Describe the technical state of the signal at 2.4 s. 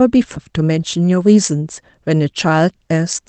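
At 2.4 s the speech signal is intact, with no fault at that moment beyond the ordinary character of the Opus call path it travels through.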